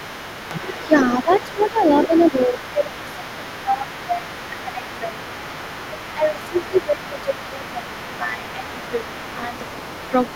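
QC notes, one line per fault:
Throughout: other side's voice leaking through. A second, fainter voice sits underneath the main talker for the whole clip, roughly 20 dB below it. The likely cause is the talker's device playing the far end on a loudspeaker, with the echo canceller failing to scrub all of that playback out of the microphone signal. The leftover echo rides along with the near-end voice instead of being removed.
0.87–0.94 s, 1.25–5.2 s, 5.83–9.63 s: speech suppressed in double talk. The main voice sinks by up to around 15 dB in places. The first dip is a brief blip of about 70 ms, and the two long stretches carry roughly 2 s and 3 s of affected sound. This is likely the echo canceller hearing both sides at once, failing to separate the talker from the echo, and turning everything down together.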